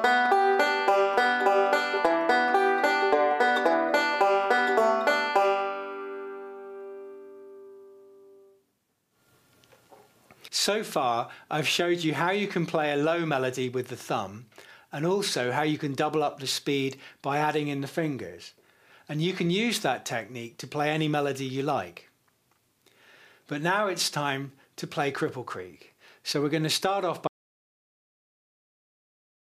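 At 27.27 s the sound cuts out abruptly and never returns. This is an audio dropout to silence. It runs for about 2.3 s, right to the end of the clip. The gap is silent. There is no room tone, hiss or background left under it. The cause is likely a lost input, such as a disconnected device or a failed link, while the recorder kept writing silence. Whatever followed that point is gone.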